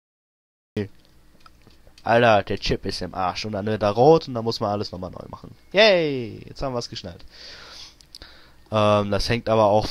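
The file opens with a cut-off start. From 0.0 to 0.77 s there is only digital silence, and at 0.77 s the sound appears abruptly, already partway through an event rather than building from its own onset. Capture evidently began late, so the material that preceded 0.77 s was never recorded and digital silence stands in its place. The transition has no attack and no fade-in: the level jumps straight from nothing to full signal.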